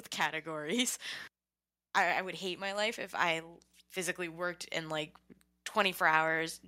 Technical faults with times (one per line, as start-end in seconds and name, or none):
1.95-5.15 automatic gain rising